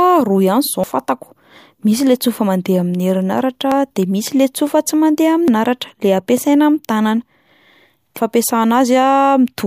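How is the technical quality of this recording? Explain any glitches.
The speech is broken by four abrupt jumps. At 0.84 s (just before "fantako misy le tsofa"), 3.72, 5.48 and 8.17 s, the audio skips ahead. Each is likely a dropped buffer (overrun). Audio is lost and its edges butt together without silence. About a tenth of a second goes in the first two, and a few tenths in the later two.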